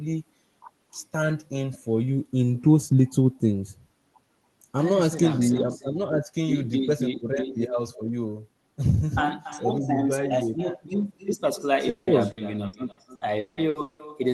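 Echo with no canceller runs through the whole of this speech recording: a quieter, thinner copy trails every phrase by around a third of a second, about 15 dB below the direct sound. The far end is playing the call over a loudspeaker, its microphone picks it up, and nothing subtracts it before sending it back. Repeated packet loss with a robotic sound hits from 11.89 s to 14.02 s, where eight gaps, the longest 180 ms, break up the speech. Each hole is patched by stretching the preceding sound, so about 39% of that stretch, 840 ms in total, is synthetic fill, giving a choppy texture with pieces missing.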